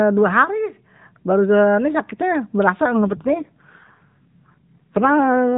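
Speech carried over a narrowband AMR mobile link, with nothing above 4 kHz. An AMR rate drop starts at 3.03 s and lasts to the end: the voice turns rougher and more synthetic, which fits a fall from 12.2 to 5.9 kbps. Unlike packet loss or a bandwidth switch, there is no gap and the band stays the same.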